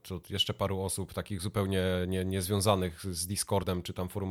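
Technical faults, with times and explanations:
3.59 to 3.65 s, damaged data in a compressed stream: corrupted bytes made the decoder misread frames and resynchronise, leaving a 56 ms chirp, click or hole in the speech.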